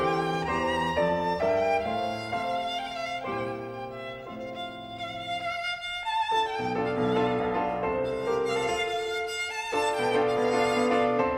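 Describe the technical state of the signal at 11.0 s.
At 11.0 s the signal is intact, with no dropout, distortion, clicks or other fault audible at that point.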